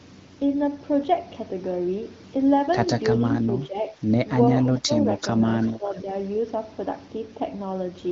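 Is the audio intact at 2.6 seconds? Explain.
Yes, the audio is intact at 2.6 seconds, with nothing there beyond the light coding of the AMR wideband (HD Voice) codec carrying the speech.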